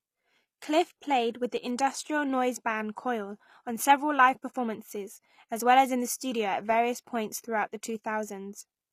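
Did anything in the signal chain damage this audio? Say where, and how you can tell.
Yes, at the codec stage, throughout the speech. The treble stays bright but sounds gritty and lispy on s sounds, which points to likely HE-AAC compression at a bitrate around 24 kbps, rebuilding highs from copied lower bands. A plain low-bitrate codec would instead dull the treble.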